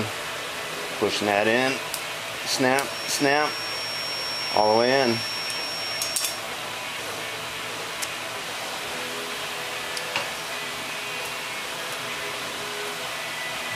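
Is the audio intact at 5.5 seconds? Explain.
No, there's a feedback whistle from 2.82 to 6.45 s: a thin, steady 5.5 kHz tone sitting a little under the sound, likely a speaker-to-mic loop hovering at the edge of feedback.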